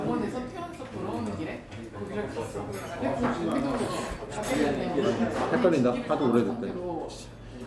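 No technical faults can be heard anywhere in the sound; the signal stays intact and continuous throughout.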